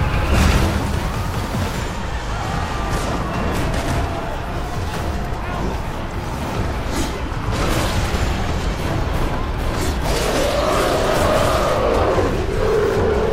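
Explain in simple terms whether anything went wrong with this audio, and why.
A train of clicks runs from 9.48 s to 13.24 s, near the end of the clip. During that stretch a sharp tick repeats at a steady pace of about 8.3 per second, around thirty in all, sitting on top of the sound. Each click looks much the same as the others. This is likely caused by an outside pulse getting into the recording, such as interference from nearby equipment or a faulty connection or power supply.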